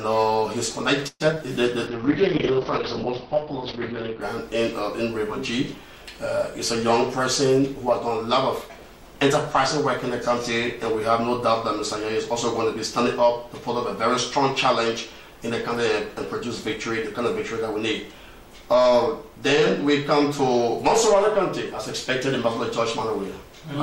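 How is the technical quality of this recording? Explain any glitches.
The recording has audible network faults in its first ten seconds.

From 1.07 to 1.41 s, repeated packet loss leaves four gaps, the longest 127 ms. Each is patched by extending the last sound, covering about 46% of the span. This sounds choppy and robotic, and a spectrogram shows smeared, repeated frames.

From 1.88 to 4.28 s, a call bitrate drop from 96 to 7 kbps makes the sound rough and muffled. On a spectrogram, content above 6 kHz vanishes, leaving a flat ceiling before it returns.

Two jitter buffer speed-ups follow, at 7.19 to 8.08 s (107%) and 8.62 to 9.15 s (109%). Short pitch-period pieces, roughly 70 ms and 50 ms in total, are trimmed. The audio sounds hurried without any pitch change, and the waveform looks compressed in time.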